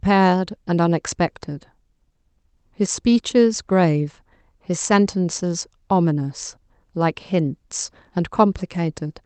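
No technical faults occur anywhere in this speech, so there are none to describe in time order; the audio simply carries the band-limited sound of a normally working WebRTC call path, topping out around 8 kHz.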